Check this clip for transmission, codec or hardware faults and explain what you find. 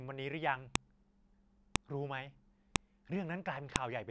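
Sharp, loud clicks cut through the speech at 0.75, 1.76, 2.76 and 3.76 s, once a second. This is a file header played as audio: one-second WAV pieces were joined with their headers kept, so those few dozen bytes play back as a snap.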